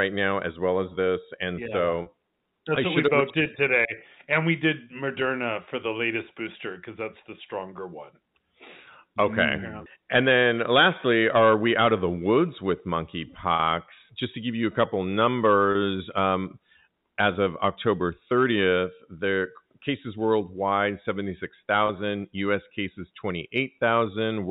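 Brief held, buzzy catches at 2.02–2.06, 13.56–13.59, 15.72–15.75 and 21.87–21.89 s are packet loss with pitch repetition: 20–40 ms of lost audio, fitting 10 ms packets, was bridged by repeating the last pitch period across the narrowband G.711 telephone coding.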